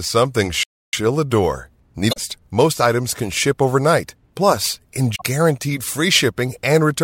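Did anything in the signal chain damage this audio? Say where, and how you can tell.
Yes. At the playback stage, the player most likely ran short of data or had its thread blocked, causing a playback stall: the speech cuts to silence from 0.63 to 0.93 s, about 300 ms.

The codec stage shows damaged data in a compressed stream at two points, 2.09 to 2.18 s and 5.12 to 5.22 s. Each is a brief disturbance of roughly 0.1 s, where the decoder misreads corrupted frames, loses sync and hunts for the next valid frame header.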